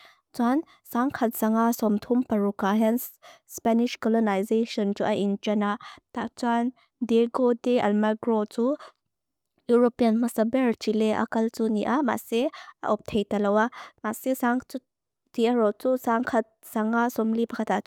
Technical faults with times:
none

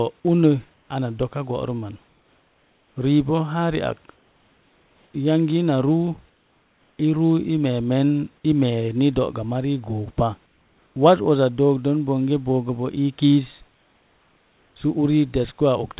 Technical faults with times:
0.74-0.90 comfort noise in place of the background
2.08-2.96 comfort noise in place of the background
4.16-5.14 comfort noise in place of the background
6.30-6.98 comfort noise in place of the background
10.46-10.96 comfort noise in place of the background
13.68-14.76 comfort noise in place of the background

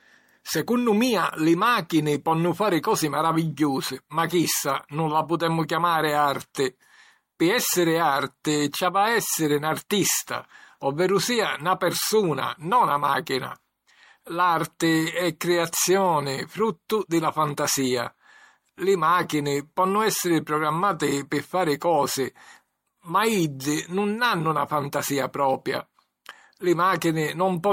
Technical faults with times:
0.00-27.72 generation loss

